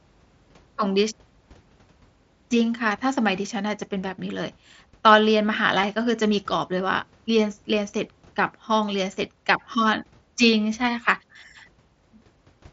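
At 5.82 s there's a brief concealed Bluetooth headset packet loss: about 7.5 ms of speech went missing over the headset link, likely one dropped packet, and the receiver patched it with a copy of the preceding waveform, so it's almost inaudible.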